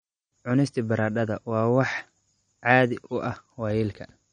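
From start to finish the speech carries plainly audible MP3 compression damage, most likely from an encoder running short on bits, which fits a low bitrate around 40 kbps. There's nothing above about 9.6 kHz, so the top end sounds dull and clipped off. Weaker frequency detail keeps dropping in and out between frames, giving that watery, swirly texture, with metallic chirping on the s sounds and consonant attacks that come across smeared.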